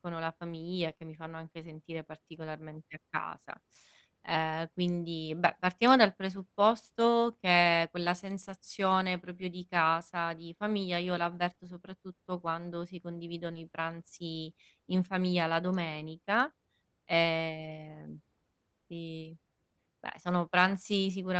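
Packets were lost three times in this speech, and each time the receiver either rebuilt the audio from the next packet's backup copy or covered the gap by continuing the sound.

Just after "la famiglia", at 0.89 to 0.91 s, one lost packet was replaced by its low-bitrate in-band copy. This lost packet rebuilt from error correction leaves no gap, but those 20 ms sound rougher and grainier.

Two consecutive 20 ms holes follow, from 0.93 to 0.97 s and 0.97 to 1.01 s, ending just before "mi fanno anche sentire". In this short concealed packet loss, the decoder extended the preceding sound to fill them, producing a brief smear or wobble.

The same pattern returns later. A rebuilt packet at 11.49 to 11.51 s is followed by a concealed gap at 11.53 to 11.57 s.

At 13.53 to 13.57 s, between "soprattutto quando si condividono" and "i pranzi in famiglia", another concealed loss overlaps a 20 ms rebuilt frame at 13.55 to 13.57 s. 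Together they give a short, rough blur.

All of this is heard through the Opus call path at 24 kbps, which limits the audio to about 8 kHz.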